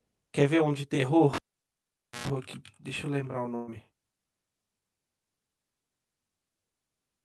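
You've got a short speech recording here with three separate problems. Throughout, there's channel delay causing comb filtering: one side runs around 20 ms behind the other, so the mono sum cancels at evenly spaced frequencies starting down near 20 Hz, leaving everything sounding rough and slightly doubled. From 1.33 to 2.28 s it's a cable pulled and plugged back in while live. You get a pop, then roughly 0.89 s of near silence, then about 118 ms of 60 Hz mains buzz as only the tip makes contact, and a second pop when the sound returns. Then at 3.55 to 3.70 s there's a burst of packet loss. The receiver papers over the gap by stretching and fading the last sound for about 119 ms, and about 120 ms of the real audio simply never arrives, so it jumps ahead.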